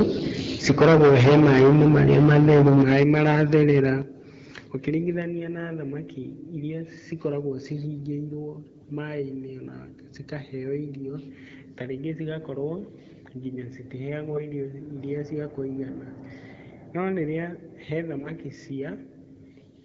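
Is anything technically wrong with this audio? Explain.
Yes. Microphone overload runs from 0.69 to 3.89 s. The input level was likely set too high, driving peaks about 16 dB past the converter's limit. With roughly a fifth of samples flattened at the converter's limit, the loudest syllables take on a harsh, crackling edge.

Microphone volume stepped down at 2.82 s and again at 4.02 s, by about 8 dB and then about 7 dB. This is likely the call software reacting to the clipping by cutting the input gain in single steps, so the level of everything drops abruptly.

AMR bit errors strike from 14.30 to 14.50 s and from 18.18 to 18.30 s. Each burst fits about five damaged frames. Flipped bits in the weakly protected parts of the frames put the excitation pulses and fine parameters in the wrong places, so the voice keeps its rough pitch and level but turns hoarse and gargly. The second burst has the higher error rate, near a tenth against a few percent in the first. 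The AMR-WB wideband coding carrying the call sounds clear, which fits a rate around 12.65 kbit/s.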